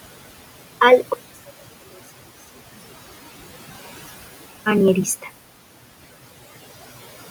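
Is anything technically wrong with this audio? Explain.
Yes, two things stand out in this speech clip.

Noise suppressor artifacts run the whole way through. The suppressor estimates which frequency bands hold steady background and pulls them down frame by frame, here by about 16 dB. The room noise, sitting about 16 dB under the speech, drops away in the gaps and creeps back up under each phrase, so the background pumps instead of staying put.

From 1.14 to 4.66 s the level falls by about 27 dB, and the voice turns into a faint trace before coming back. The likely cause is one channel inverted: with one side's polarity flipped, anything common to both channels cancels when they're folded to mono. A centred voice is almost all common content, so it nearly disappears, leaving only the small differences between the channels as a faint ghost of the original.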